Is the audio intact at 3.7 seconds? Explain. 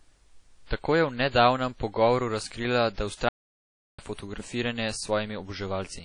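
No. At 3.7 seconds the clip is inside an audio dropout to silence running from 3.29 s to 3.98 s, about 0.7 s in all. The speech stops abruptly mid-flow and the gap is silent, with no room tone or noise floor, before the sound resumes just as abruptly. The input was likely lost, through a disconnected device, a failed link or an accidental mute, while the recorder kept writing empty samples, so whatever was spoken in that span is gone.

The same moment also sits within a fault that spans the whole file: low-bitrate audio saved at a high bitrate. The speech around the gap carries the artefacts of a heavy earlier encoding, consistent with a source near 32 kbit/s, perhaps WMA, that was later re-encoded to MP3 at around 256 kbit/s. The higher rate of the second pass cannot restore the detail the first pass discarded, so the earlier artefacts remain audible.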